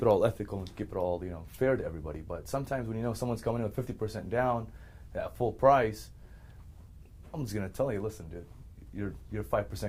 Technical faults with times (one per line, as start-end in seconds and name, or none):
3.44-5.44 video or display buzz